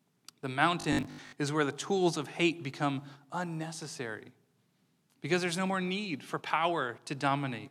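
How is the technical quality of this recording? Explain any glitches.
The recording has one clear glitch, robotic sound from repeated short buffers, from 0.81 to 1.33 s. The likely cause is audio arriving too slowly, so about half of the sound there is a looped 20 ms chunk. The repetition imposes a rigid 50 Hz metallic buzz that only loosely tracks the speech.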